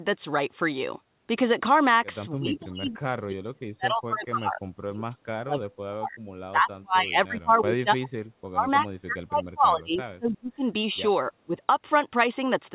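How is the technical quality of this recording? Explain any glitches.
The speech repeatedly drops out, and the narrowband call sound tops out at 4 kHz, consistent with a G.711-style telephone codec. Speech suppressed in double talk occurs at 2.37–4.63 s, 4.86–6.19 s, 6.51–10.64 s and 11.3–11.56 s. The echo canceller likely mistook overlapping talk for echo, pulling the voice down by up to about 40 dB, so it fades and breaks up.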